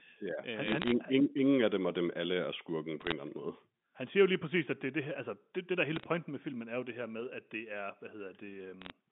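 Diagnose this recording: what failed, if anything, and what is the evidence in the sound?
What failed is the digital transmission on the phone line: bit errors on a digital phone line, riding on a G.711 mu-law path that tops out around 3.6 kHz. You get short bursts of sharp ticks and crackle at 0.66 to 0.92 s (just before "ingen af dem og"), 3.01 to 3.12 s (between "dem alle er skurken" and "eller anden måde"), 5.96 to 6.04 s (after "altså det det der") and 8.82 to 8.90 s. Flipped bits, a fraction of a percent, corrupt individual samples, and sign or high-bit hits jump out as clicks.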